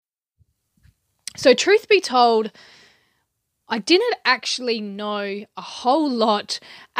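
No technical faults are audible in this recording.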